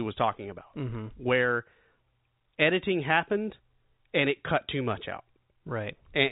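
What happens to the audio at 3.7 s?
At 3.7 s the speech runs on intact, with no dropout, click, distortion or other fault at that moment.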